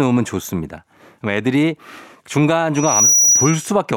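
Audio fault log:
2.75–3.71 s, loudspeaker feedback squeal: a 5.8 kHz tone swells over roughly 0.4 s to about 5 dB above the speech, as mic-to-speaker loop gain exceeds unity there.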